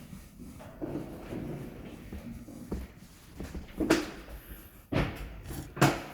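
A call bitrate drop runs from 2.71 to 4.23 s, with the sound at its worst for about 1.45 s. The encoder appears to fall from around 64 kbps to roughly 13 kbps, so the audio turns coarse, watery and dull, losing its top end until quality returns.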